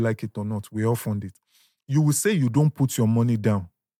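No technical faults occur at any point in the recording.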